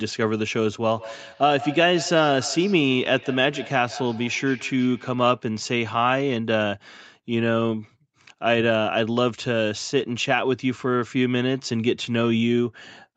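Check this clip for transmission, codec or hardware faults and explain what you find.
One fault is present in this speech. Feedback echo between two devices, 0.88 to 5.58 s: another device replays the sound into this microphone, so each word returns every 150 ms or so, about 15 dB below the speech.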